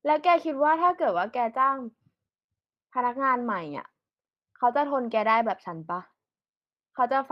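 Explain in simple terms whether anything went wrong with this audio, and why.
Nothing went wrong here.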